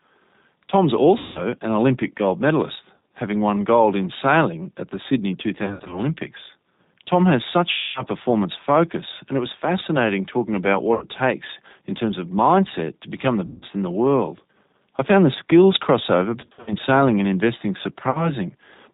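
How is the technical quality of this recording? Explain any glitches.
The technical quality is poor: the sound is rough and band-limited from start to finish, with eight dropouts where it briefly turns buzzy or smeared.

Throughout, the speech is intelligible but grainy and slightly synthetic, with no brightness above about 4 kHz. This is G.729 codec coloration, and the damage is plainly audible. The character points to G.729A at about 8 kbit/s. That codec does not store the waveform. It rebuilds each short frame from a vocal-tract filter, a pitch predictor and a handful of pulses, which is why the texture sounds roughened.

The glitches are VoIP packet loss concealed by the speech codec. They occur at 1.18 to 1.42 s; at 2.97 s, between "gold medalist" and "having won gold in"; at 5.64 to 6.00 s; at 7.72 to 8.03 s; at 10.94 to 11.05 s; at 13.46 to 13.66 s; at 16.41 to 16.75 s, between "found the skills crossover" and "sailing and investing"; and at 18.11 to 18.32 s, after "sailing and investing". 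Each sounds like the voice being stretched into a fading buzzy tone or coloured noise before the speech returns sounding weak or distorted. At 5.64 s and 16.41 s the breaks are scattered, with no single gap longer than 60 ms. The longest stretch of missing audio is about 230 ms, at 7.72 s. The decoder fills each gap by repeating its last pitch and filter at falling gain. Because every frame depends on the previous one, the sound stays degraded for a short time after the audio resumes.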